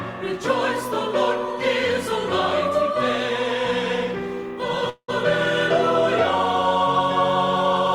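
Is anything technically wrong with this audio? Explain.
Yes. A call audio freeze runs from 4.89 to 5.10 s. Packets were likely held up in transit and the jitter buffer emptied, so the last sound was stretched into a fading buzz ending in 70 ms of silence. The audio then resumes intact, but everything after runs 188 ms late.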